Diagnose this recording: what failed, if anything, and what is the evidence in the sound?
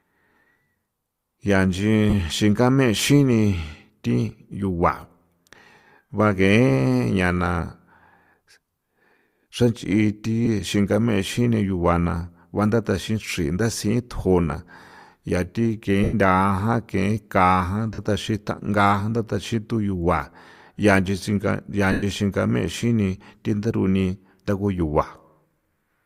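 Five short holes in the speech are filled with a grainy, noisy smear rather than silence: at 2.10 s (30 ms), 10.45 s (15 ms), 16.03 s (97.5 ms), 17.93 s (52.5 ms) and 21.92 s (105 ms, just before "xingame xini thin theruni"). The longer gaps fade toward quiet. These are lost LE Audio frames on the Bluetooth link. The durations point to runs of 7.5 ms frames, likely from an LC3 stream. The decoder concealed each loss by repeating the last spectrum with scrambled signs.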